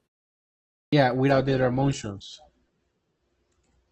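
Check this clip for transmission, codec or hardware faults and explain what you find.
Two faults are audible in this speech recording: a clipped start after a pause, then a lasting drop to a lower-bitrate adaptive stream.

Clipped start after a pause, at 0.79 s: after roughly 0.8 s of silence from the top of the clip, the output device had dropped into an idle state and needed time to wake and resynchronise before it could play again. About 135 ms of the incoming speech was discarded during that wake-up, so sound only emerges at 0.93 s. The first word therefore begins abruptly, as if its opening consonant or syllable had been cut away.

Adaptive stream at a lower bitrate, from 1.3 s to the end: the connection appears to have slowed, and the adaptive player switched to a much cheaper encoding of the same stream. The change in character fits a step from around 64 kbit/s down to 12 kbit/s Opus. 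From that moment nothing above 8.3 kHz remains, so sibilants lose their crispness and the voice turns dull, with more coding artefacts. The switch is instant, with no gap.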